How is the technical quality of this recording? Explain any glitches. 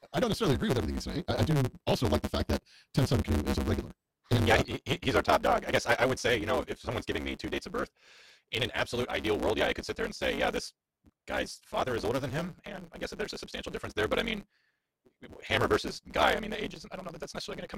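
One fault runs through the whole clip: a block size mismatch (truncated). One stage writes longer blocks, which fits 512-sample writes, than the next reads, so each block's tail is discarded. The speech runs 1.6 times fast with its timbre intact, with a 138 Hz buzz at the block rate.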